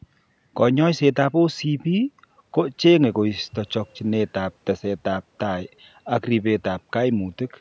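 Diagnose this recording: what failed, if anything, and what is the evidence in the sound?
Nothing failed; this speech recording shows no faults.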